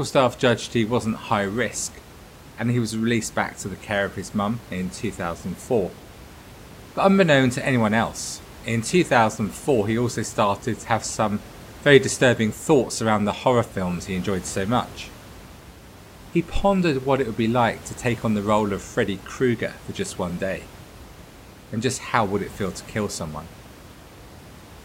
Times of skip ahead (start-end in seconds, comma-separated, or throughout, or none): none